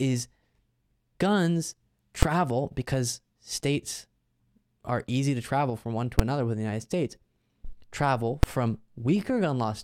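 A speech recording with three sharp bangs from invalid numbers at full scale, at 2.23 s just before "because states", at 6.19 s between "travel from one to" and "another within the", and at 8.43 s. In each, a calculation yielded infinite or invalid values that were pinned to the maximum level for a block of about 5 ms, so each lands as a single bang. Unlike clipping, it is not tied to loud syllables, and unlike a dropout click, the level jumps to maximum rather than falling to silence.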